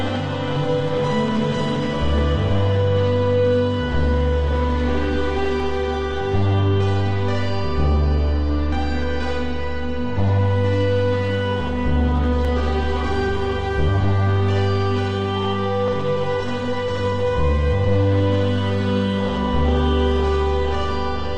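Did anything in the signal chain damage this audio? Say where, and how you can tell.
Yes. Regular clicks every 3.41 s, from 2.18 to 19.29 s, are likely clock drift buffer slips: mismatched device clocks make the buffer drop or repeat samples.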